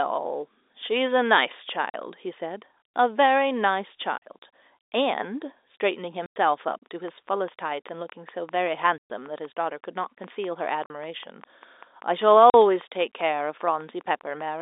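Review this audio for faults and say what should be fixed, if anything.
Packet loss filled with silence cuts into the speech at 1.90, 4.18, 6.26, 8.98, 10.86 and 12.50 s. The gaps last 40, 40, 100, 120, 40 and 40 ms. All are multiples of 20 ms, which fits 20 ms packets being dropped and replaced by digital silence with abrupt edges. Packet loss concealment in the receiver's jitter buffer, or forward error correction on the link, would fill or recover these holes instead of muting them.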